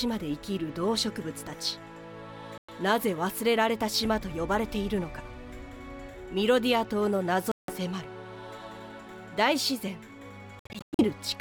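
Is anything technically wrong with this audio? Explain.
Yes. The sound drops to silence three times: at 2.58 s for about 0.11 s, at 7.52 s for about 0.17 s, and from 10.59 s in broken gaps over 0.4 s. It resumes further on, as if it had played on. This is likely a Bluetooth dropout, where late packets are discarded.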